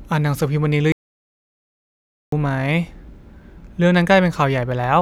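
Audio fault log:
0.92–2.32 s, audio dropout to silence: the speech stops abruptly mid-flow and the next 1.4 s is pure silence, with no room tone or background hiss underneath, before the speech resumes just as suddenly. That dead-flat gap is what gives it away: the input signal was likely lost, through a disconnected device, a failed link or an accidental mute, while the recorder kept writing silence, so whatever was said during that stretch is gone.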